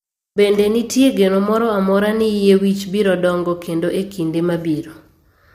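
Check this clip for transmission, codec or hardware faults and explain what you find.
One codec fault is audible, present for the whole clip.

Low-delay AAC compression, throughout: the speech sounds rough and grainy, with a hiss filling the gaps between the harmonics and a top band that sounds thin and partly synthetic. The likely cause is AAC-ELD, the low-delay AAC used for video calls. Its very short frames separate pitch harmonics poorly and need more bits for the same quality. The plainly audible damage points to a low bitrate, around 32 kbps.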